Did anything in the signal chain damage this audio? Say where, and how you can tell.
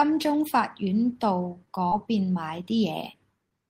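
Yes, at the network stage: short concealed packet loss at 1.89–1.94 s, 3.12–3.15 s and 3.49–3.52 s. Each time, about 20 ms of speech arrived too late, and the decoder extrapolated the preceding sound before blending back, leaving brief smears or wobbles.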